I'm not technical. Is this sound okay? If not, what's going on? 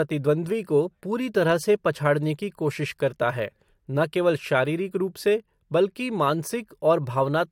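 Yes, this sound is okay; nothing is going wrong with it.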